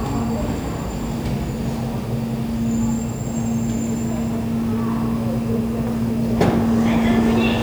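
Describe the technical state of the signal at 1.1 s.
At 1.1 s the sound shows low bit depth without dither, present across the whole clip. The grain likely comes from rounding to about 7 bits with no dither. The error tracks the signal, sitting roughly 25 dB below it. Quiet parts turn gritty.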